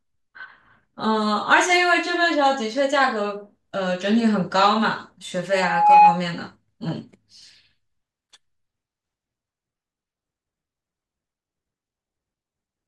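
A loudspeaker feedback squeal interrupts this speech recording: the microphone was picking up the loudspeaker it was feeding, and around 832 Hz the loop gain rose above one, so that frequency kept reinforcing itself on each pass. From 5.52 s a single tone swells over roughly 0.4 s until it sits about 10 dB above the speech, a piercing whistle that holds until it cuts off at 6.23 s.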